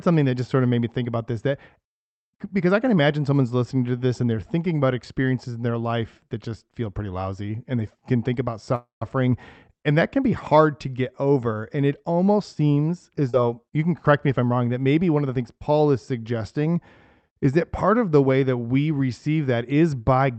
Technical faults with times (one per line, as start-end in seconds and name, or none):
8.75-9.02 call audio freeze
13.30-13.34 skip ahead